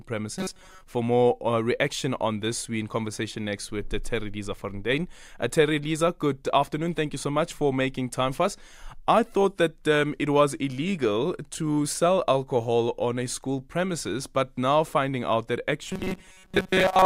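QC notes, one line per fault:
0.38–0.83 s and 15.87–17.05 s (after "now finding out that"): robotic sound from repeated short buffers, a rigid 188 Hz buzz, likely from a 5.3 ms chunk looped over most of the skipped audio; spectrogram shows flat, evenly spaced harmonic stripes, and the waveform shows identical repeating cycles.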